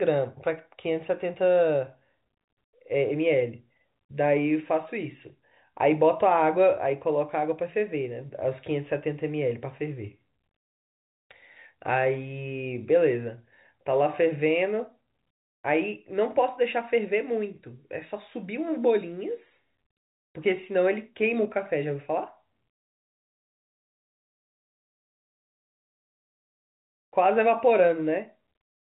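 No faults are audible anywhere in this speech recording.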